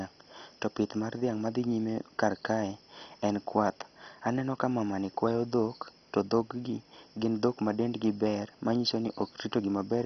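All the way through, the speech sounds dull and gurgly, with nothing above 6.1 kHz and a granular, watery grit. That's likely heavy MP2 compression: starved of bits, the codec drops its upper sub-bands and coarsely quantises the rest, which fits a rate around 32 kbps.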